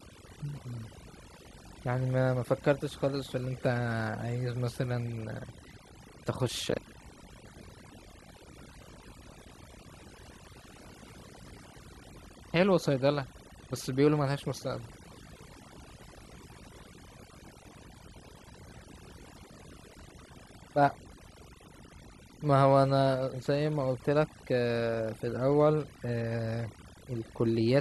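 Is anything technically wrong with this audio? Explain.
Yes. The speech has overdone noise removal throughout. A noise reducer set far too aggressively pulls individual frequency bands down or out whenever they sit close to its noise estimate, and the softer parts of the voice fall into that range. The pauses drop to near silence sprinkled with twinkling specks. Unlike a noise gate, which shuts the whole signal at once, this works band by band, so the specks persist even while speech continues.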